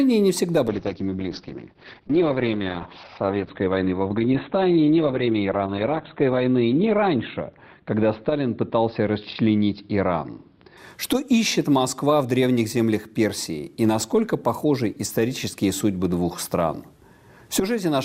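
From 0.69 to 10.83 s sound turns muffled and rough, nothing above 4 kHz: a call bitrate drop, fitting coding starved to about 7 kbps.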